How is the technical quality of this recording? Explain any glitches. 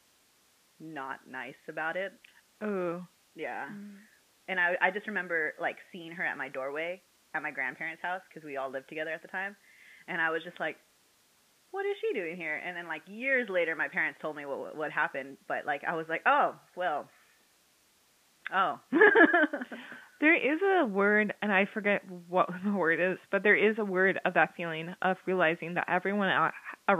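No glitches are audible in the speech, with only room noise in the background, about 50 dB below the voice.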